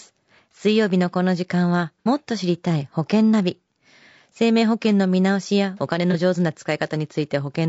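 Low-delay AAC compression likely runs through the whole speech clip, and a bitrate near 32 kbps fits what is heard. Short AAC-ELD frames resolve pitch harmonics poorly, so the speech sounds plainly rough and grainy, with noise filling the gaps between harmonics and a synthetic-sounding top band.

AAC frame loss with concealment occurs at 2.00 to 2.08 s and again at 6.11 to 6.15 s. The decoder rebuilt the missing audio from the last good spectrum, about 60 ms the first time and about 30 ms the second, leaving brief smeared, noisy patches.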